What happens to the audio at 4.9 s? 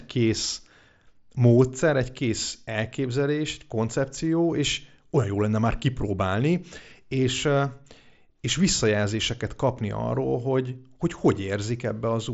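Nothing goes wrong at 4.9 s: the speech carries on intact there, heard through the band-limited Bluetooth mSBC headset codec with nothing above about 7.7 kHz.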